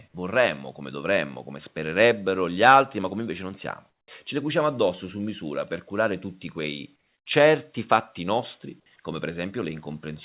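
Comfort noise in place of the background appears at 3.9 to 4.08 s and 6.96 to 7.26 s, where the real background drops out for 180 ms and then 300 ms and is replaced by a steady, featureless hiss about 7 dB and about 6 dB quieter. The likely cause is discontinuous transmission: the sender stopped sending in these pauses and the receiver synthesised shaped noise. The audio has nothing above 4 kHz, consistent with a narrowband G.711 call.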